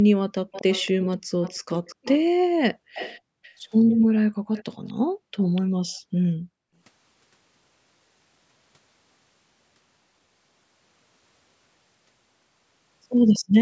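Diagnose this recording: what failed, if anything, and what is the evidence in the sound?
Echo leak in call processing: a faint copy of the speech trails it by 244 ms at 0.52–1.16, 1.42–2.25, 2.95–3.19, 3.43–3.54, 4.53–4.93, 5.41–5.62 and 13.34–13.39 s, roughly 15 to 30 dB down. The likely cause is a far-end loudspeaker's echo canceller passing residue back. A spectrogram shows ghost harmonics shifted right, under an 8 kHz band limit.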